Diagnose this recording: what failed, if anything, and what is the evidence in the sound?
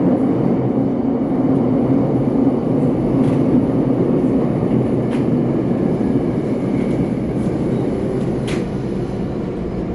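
MP3 compression damage runs through the whole clip, a codec-stage fault. Nothing sits above 11.3 kHz, and a plainly audible watery swirl comes from weak frequency lines dropping in and out between frames, likely an encoder starved of bits, which fits about 48 kbps.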